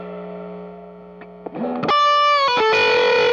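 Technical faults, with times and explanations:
1.90 s, damaged data in a compressed stream: a stretch of the encoded data reaching the decoder here was corrupt, whether through lost, zeroed or overwritten bytes or foreign data mixed into the stream. The decoder could not read the affected frame correctly, lost its place and had to hunt for the next valid frame header before resuming. That failure surfaces as a brief disturbance of about 4 ms, a momentary break in the audio where the decoding went wrong.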